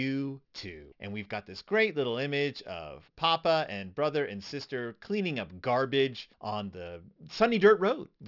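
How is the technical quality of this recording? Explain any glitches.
The recording has a clear technical problem that runs through the whole speech clip. Aliasing is present from start to finish. The audio appears to have been resampled down without an anti-aliasing filter, which fits a drop to a 12 kHz rate. Energy above 6 kHz folds back below it, around 25 dB under the speech, so sibilants sound gritty and metallic. On a spectrogram, content runs hard up to a 6 kHz ceiling, with mirrored, unrelated streaks beneath it.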